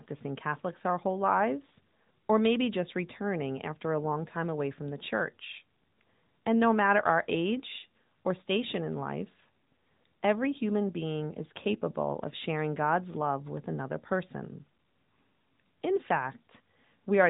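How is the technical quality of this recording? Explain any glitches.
Technical quality is limited by one fault throughout: AMR narrowband mobile codec. The speech was encoded with AMR-NB, a phone codec that rebuilds the voice from a vocal-tract model fed by sparse pulses. Nothing above 3.8 kHz survives, giving a muffled telephone sound, and plainly audible coding damage points to a mid-range bitrate around 10 kbps.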